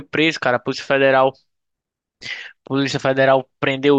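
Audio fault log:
No faults are audible anywhere in this speech recording.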